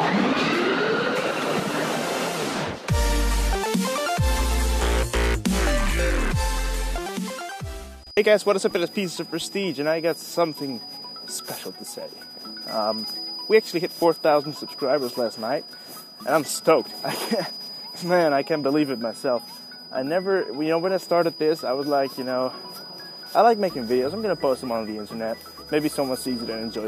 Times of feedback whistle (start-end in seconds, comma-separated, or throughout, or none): 7.96-26.88